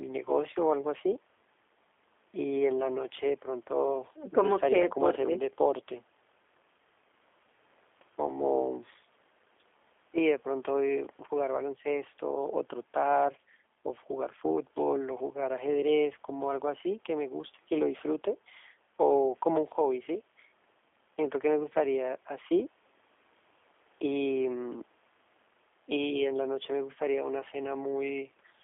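From start to end, the speech carries plainly audible G.729 codec damage. Besides the 300 Hz to 3.5 kHz line band, a rough, synthetic buzz suggests 8 kbit/s coding that rebuilds each frame from a vocal tract model and a few pulses. Simple band-limiting would only dull the sound.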